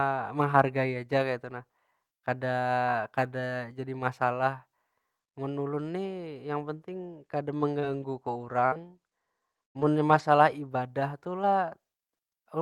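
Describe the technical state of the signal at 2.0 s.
At 2.0 s the speech signal is intact, with no audible technical fault at that moment.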